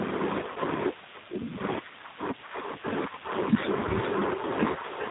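Throughout, the G.729 codec leaves the sound cut off above 4 kHz with a rough, synthetic quality, which fits an 8 kbit/s coder. That roughness is what sets it apart from a plain low-pass filter.

From 0.52 to 0.58 s, VoIP packet loss concealed by the speech codec replaces about 40 ms, which fits two lost packets. Instead of a silent gap or click, the decoder stretches the last sound into a fading buzzy tone or coloured noise that stays weak briefly afterwards.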